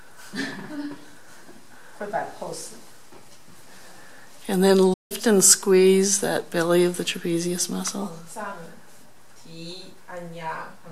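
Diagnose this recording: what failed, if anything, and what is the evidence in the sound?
A playback stall runs from 4.93 s to 5.12 s: the sound cuts out abruptly mid-flow and the output stays silent for roughly 0.17 s before resuming. This points to the playback stage, likely a player that ran dry of data or had its output thread blocked until it recovered.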